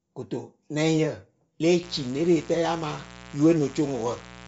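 Speech runs band-limited throughout, with nothing above 7.7 kHz and a grainy, breathy edge, most likely Bluetooth LC3 compression with 10 ms frames at a low bitrate, which fits around 32 kbps. From 1.83 s to the end, a steady, raspy mains buzz at 60 Hz with harmonics sits about 20 dB below the speech, pointing to switching spikes from a dimmer, rectifier or missing shield.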